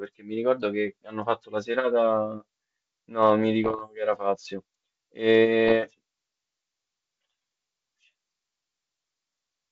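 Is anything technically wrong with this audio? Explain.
Yes. Bit errors on an ADPCM link hit this speech at 3.64–3.83 s and 5.68–5.75 s. Flipped bits derail the decoder's step size and predictor, causing pops and brief rough, level-jumping bursts.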